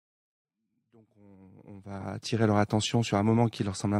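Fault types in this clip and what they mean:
Corrupt frame decoded: Flipped bits in compressed data were played anyway. A brief glitch, peaking around -35 dBFS, sounds from 2.00 to 2.05 s, which fits a couple of damaged frames.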